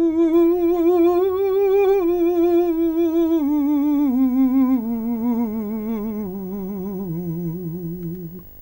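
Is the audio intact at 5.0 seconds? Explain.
No. Video or display buzz runs from 0.33 s to 8.62 s: a screen or video cable couples into the music, giving a 50 Hz field-rate buzz with hash above it, about 25 dB down, plus a 15.6 kHz line tone. A spectrogram shows steady horizontal lines at 50 Hz harmonics and 15.6 kHz.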